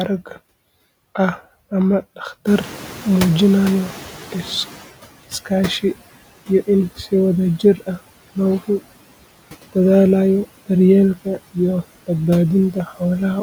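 Noise suppressor artifacts run through this whole speech clip: the suppressor is pulling the steady background down by about 16 dB frame by frame, so the leftover noise sinks in the gaps between words and comes back up underneath them. Around 2.5 s the room noise jumps by about 17 dB, and you can hear the noise suppressor catching up from 2.46 to 4.91 s: its noise estimate lags the change, so the louder background leaks through with little reduction at first and then settles down over roughly 2.45 s as the estimate adapts, ending up about 13 dB lower. The room noise itself is part of the recording, sitting about 18 dB below the speech after the rise. There are also two spots of speech cut by the noise suppressor, where it mistook bits of the voice for noise and turned them down along with the background: 7.59 to 7.88 s, dipping by as much as about 10 dB over roughly a tenth of a second, and 12.73 to 13.01 s, dipping by about 12 dB over about 150 ms. 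In both places the quieter sounds come out swallowed and faint.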